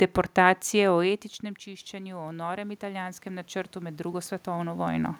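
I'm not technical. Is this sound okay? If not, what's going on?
No. Around 1.0 s the speaker moves away and gets quieter. After "deportacije o etničnem", from 1.64 s to 5.15 s, automatic gain rising sets in. The system slowly turns the volume up, so voice and room noise swell together. It only partly catches up.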